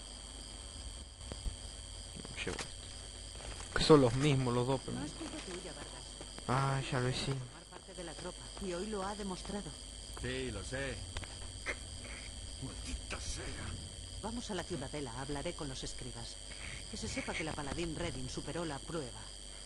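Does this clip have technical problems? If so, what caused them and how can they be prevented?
Yes. At 1.02–1.21 s and 7.32–7.95 s the level abruptly falls by about 6 dB, then returns. That's one channel dropping out, likely from a flaky cable or connector on one side, so the mono sum loses half of what both channels shared. Reseat or replace that lead before recording.

There's also a loud pop: a quick pair between 1.32 and 1.50 s, single ones at 6.39–6.42 s and 17.51–17.55 s, all jumping well above the surrounding sound, the last noticeably the hardest. These are likely voltage spikes from a switch, static or a plug being disturbed, riding on top of the audio, which keeps going underneath. Avoid patching or switching anything while rolling.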